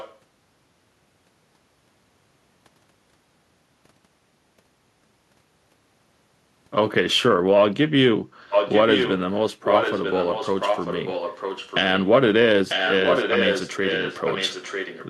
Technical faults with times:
0.00-0.17 echo leak
8.50-9.19 echo leak
9.63-11.80 echo leak
12.69-15.08 echo leak

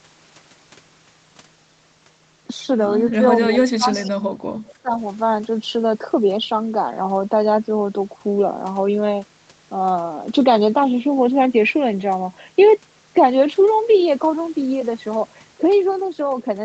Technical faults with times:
3.47-4.36 speech suppressed in double talk
3.91-4.10 echo leak
4.66-4.74 echo leak
4.82-4.92 speech suppressed in double talk

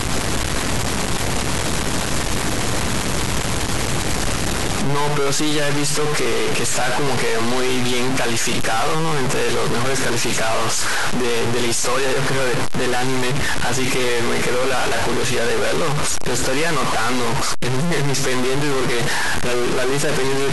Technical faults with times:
0.00-20.52 stuck bit

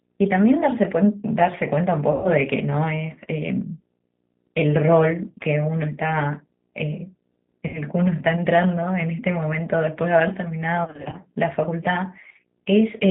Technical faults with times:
0.00-13.10 G.729 codec
2.12-2.29 VoIP packet loss concealed by the speech codec
7.67-7.81 VoIP packet loss concealed by the speech codec
10.84-11.18 VoIP packet loss concealed by the speech codec

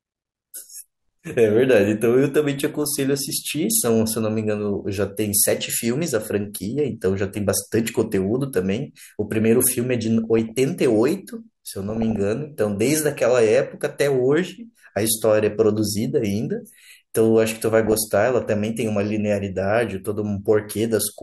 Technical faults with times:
2.57-2.94 DAB burbling
10.24-10.60 DAB burbling
11.90-12.21 DAB burbling
13.56-13.67 DAB burbling
17.85-18.10 DAB burbling

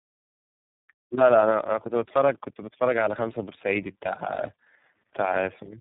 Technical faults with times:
0.00-5.80 tandem speech coding

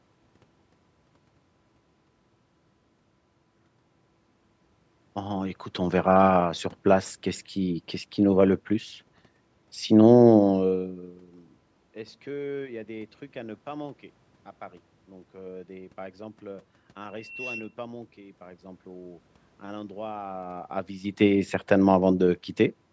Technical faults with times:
17.06-17.75 loudspeaker feedback squeal

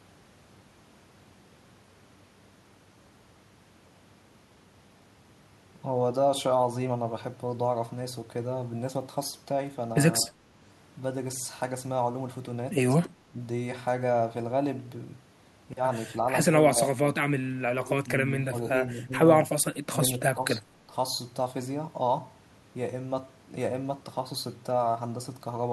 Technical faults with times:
10.26-10.37 speech suppressed in double talk
13.29-13.36 speech suppressed in double talk
16.74-17.05 speech suppressed in double talk
17.59-18.09 speech suppressed in double talk
18.50-18.73 speech suppressed in double talk
19.04-19.13 speech suppressed in double talk
19.89-20.92 speech suppressed in double talk

